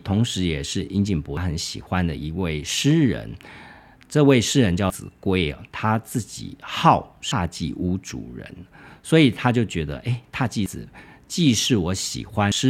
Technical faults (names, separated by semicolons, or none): damaged data in a compressed stream